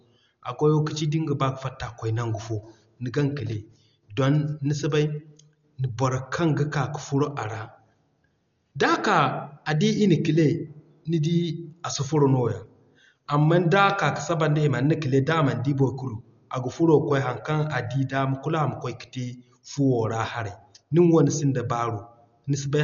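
From start to finish the speech sounds dull and boxed-in, with nothing above 7 kHz, and there's a rough, fluttering noise clinging to the voiced parts. That's heavy codec damage, most likely Dolby Digital compression squeezed hard, which fits a bitrate down around 48 kbps. At that rate the encoder cuts the top of the band and leaves many frequency lines with no real detail, so the decoder fills them with noise, giving that grainy flutter around the voice.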